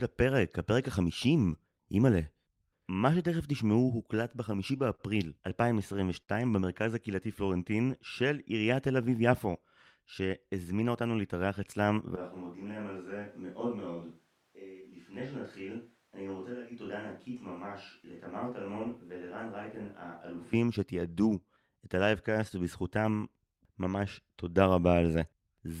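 Between 4.15 and 5.01 s the speech runs into repeated stalls, a stutter. Packets arrived late or too slowly, so the jitter buffer emptied five times, and each time the receiver extended the last sound to fill the wait. About 74 ms of filler went in, roughly 9% of that stretch, the longest gap 38 ms, with nothing lost. The speech drags and catches. On a waveform the dropouts show as short, flattened repeats of the preceding cycle, and on a spectrogram as brief smeared horizontal bands where the formants freeze.

At 6.23 to 6.30 s comes a short stall from a late packet. A single packet missed its slot, the buffer ran dry, and the receiver held the current sound for 51 ms until it arrived, then continued from the same point. Nothing is missing, but one sound lingers too long with a slight buzz or dip. A spectrogram shows a stretch of frozen, slightly striated harmonics, and the waveform a run of near-identical periods.

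From 7.26 to 7.88 s a jitter buffer slow-down stretches the audio. The buffer was short of reserve, so the receiver repeated individual pitch periods and fragments of pause, adding 36 ms and playing at 96% speed. Pitch stays put while sounds are drawn out. The spectrogram shows slightly elongated syllables with unchanged harmonic spacing, and the waveform shows duplicated cycles.

Between 10.26 and 11.02 s the opposite happens, a jitter buffer speed-up. Too much audio had built up, so the receiver cut out short pieces of one or a few pitch periods, around a tenth of a second in total, running at 111% speed. The speech sounds hurried at the same pitch. Syllables look compressed along the time axis, and the waveform shows small splices between periods.

From 12.16 to 20.54 s there is a switch to a distant microphone, likely because the close microphone's signal dropped out and a farther one took over. 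The change is abrupt in both directions. The sound turns roomy and hollow, thinner in the bass, about 10 dB quieter, with room noise only about 35 dB below the speech. On a waveform the envelope steps down sharply at the start and back up at the end. The spectrogram loses low-frequency energy and gains a raised noise floor and reverberant tails.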